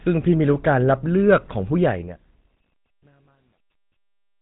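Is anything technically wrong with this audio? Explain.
Yes. Two problems are audible in this speech clip.

Throughout, the signal has passed through a GSM full-rate codec. The encoder models the vocal tract and drives that model with a sparse, regularly spaced pulse excitation, so much of the natural waveform detail is discarded. The data rate is consistent with the standard 13 kbps mode. Nothing above 3.8 kHz survives, which makes the voice sound dull and narrow, and a plainly audible buzzy, gravelly roughness sits on the voice.

From 1.77 s to the end at 4.41 s there is truncation distortion on a fade. The fade-out, which runs from 1.77 s to 4.42 s, was calculated at too low a word length, which fits an 11-bit stage, and no dither was added. As the level drops toward the smallest step, the waveform collapses into a few coarse square steps. From 2.66 s onward this is worst: the tail turns gritty instead of thinning out cleanly.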